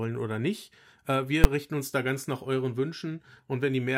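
Speech with a single loud bang at 1.44 s, caused by invalid numbers at full scale: a calculation produced infinite or invalid values that were clamped to the maximum level for a 10 ms block. On a waveform it appears as a flat slab far beyond the speech peaks, and on a spectrogram as a thin, bright, broadband vertical stripe.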